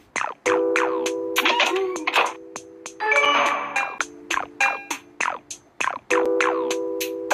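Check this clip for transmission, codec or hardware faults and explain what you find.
Two short dropouts are audible, at 3.25 s and 6.25 s, each a block of digital silence about 5.3 ms long. At both points the audio stops dead and resumes with no fade, so the hard edges produce a brief tick rather than a noticeable hole. A gap of that length fits a 256-sample buffer that was not filled in time. The identical length and exact 3 s spacing point to a periodic processing stall. On a waveform each appears as a near-flat line with abrupt vertical steps at both ends. On a spectrogram each is a thin empty column bounded by broadband vertical streaks from the edge clicks.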